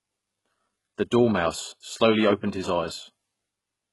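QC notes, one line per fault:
Throughout, HE-AAC compression: the treble is present but synthetic. The upper band sounds rebuilt from copied lower content rather than captured, so its harmonics fail to line up with those below the crossover, and s sounds come out gritty and metallic. The damage is heavy and nothing remains above 11.5 kHz, which fits a very low bitrate, around 12 kbps. The likely cause is HE-AAC encoding with spectral band replication filling in the top end.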